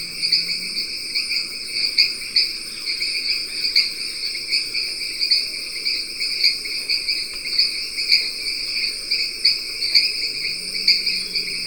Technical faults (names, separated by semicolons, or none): none